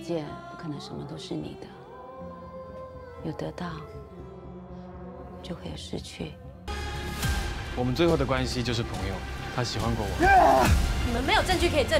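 From about 6.06 s to 11.18 s there's a run of periodic USB or driver dropouts, roughly every 1.02 s. Something keeps stalling the audio path, and around a millisecond of sound just gets skipped each time, so you hear about seven evenly spaced little ticks riding on the signal.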